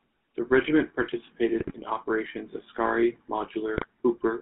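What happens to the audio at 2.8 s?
At 2.8 s the speech is still passing through the GSM full-rate codec, which runs for the whole clip. The band is held to about 200 Hz–3.6 kHz, and the pulse-driven vocal-tract model leaves a plainly audible buzzy, gravelly roughness, consistent with a 13 kbps full-rate coder.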